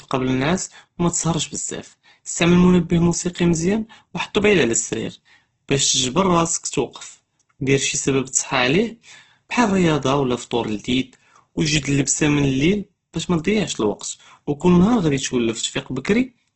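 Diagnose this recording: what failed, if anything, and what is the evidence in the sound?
Throughout the speech the sound is rough and grainy, tones turning noisy rather than swirling, with nothing above about 8.2 kHz. That points to the codec stage, likely Opus compression in its CELT music mode, starved near 12 kbps and filling bands with folded or noise energy.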